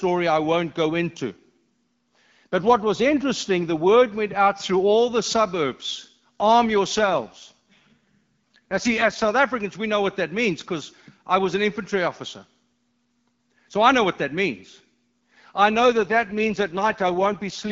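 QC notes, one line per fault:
6.97–9.36 s and 15.79–17.71 s, AMR rate drop: just after "all the suburbs arm" the HD Voice sound turns rough and raspy, which fits AMR-WB stepping down from 12.65 to 6.6 kbit/s for error protection. The bandwidth holds with no gap. The first drop clears when the rate recovers, and the second runs to the end.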